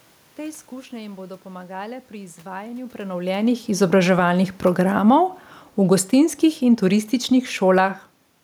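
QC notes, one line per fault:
3.75–5.22 s and 5.77–8.08 s, automatic gain falling: right after "pomagale pri izvajanju prenovljenih" the speech and its background sink together, by about 3 dB over the first stretch and then by about 5 dB more over the second. The automatic gain control found the input too loud or its background noise too strong, so it pulled its gain down in gradual steps. Because the room noise drops along with the voice, this is a gain change and not the talker moving, which happens separately around 3 s and 8 s.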